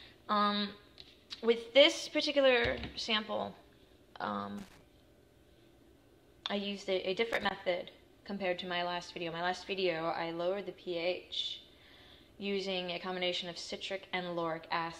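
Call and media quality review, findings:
Loose connector crackle, 4.58–4.81 s and 7.33–7.51 s. Two irregular scratchy bursts, roughly 0.23 s and 0.18 s long. Probable component: worn or dirty jack or cable contact in the capture path. Mechanism: contact intermittently making and breaking as it shifts, chopping the signal into fragments; any DC present on the line turns each make/break into a pop, giving the ragged crackle texture. Reseat or clean the connector, then replace the cable.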